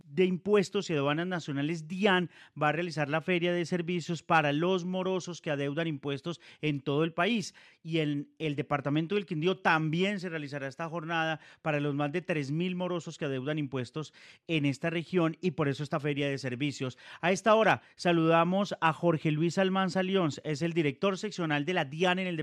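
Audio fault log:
No technical faults are audible; the signal stays continuous for the whole clip.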